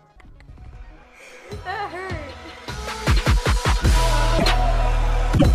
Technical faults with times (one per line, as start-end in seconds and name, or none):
4.38-4.45 broken MP3 bit reservoir
5.37-5.44 broken MP3 bit reservoir